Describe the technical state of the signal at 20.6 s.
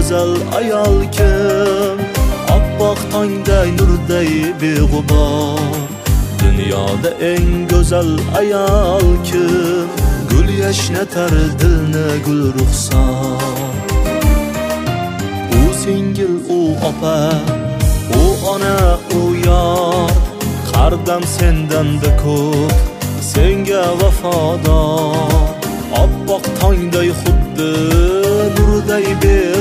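At 20.6 s you're right at the tail of a short burst of CD scratch ticks, running from about 19.78 to 20.63 s. A blemish on the disc beats the error correction once per revolution, so the player patches or mutes a sliver of audio. You hear four quick ticks, the longest about 1.5 ms.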